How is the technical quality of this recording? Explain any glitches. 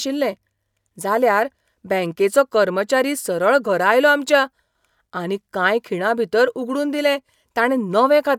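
The technical quality of this recording is sound, with no glitches to explain.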